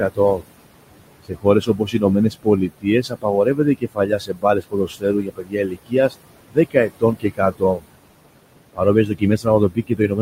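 Noise suppressor artifacts run throughout. The suppressor pulls the steady room noise down about 21 dB between phrases, so the background sinks between phrases and rises under the speech. Speech cut by the noise suppressor comes at 0.1 to 0.44 s, 1.24 to 6.14 s, 6.47 to 7.88 s, and 8.73 s to the end. Soft sounds are mistaken for noise and drop up to about 22 dB, so they sound swallowed.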